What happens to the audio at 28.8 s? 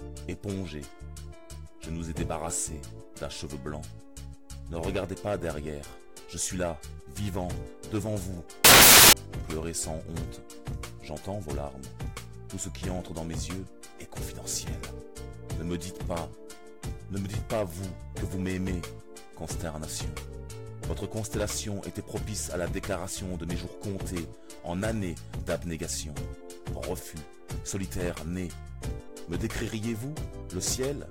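Nothing goes wrong at 28.8 s; the audio is intact at that point.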